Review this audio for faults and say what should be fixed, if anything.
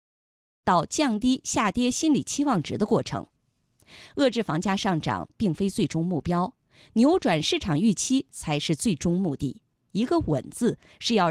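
Nothing here needs fixing: the speech opens with a smooth fade-in from around half a second to 0.66 s, with no click or hard edge, and there are no faults.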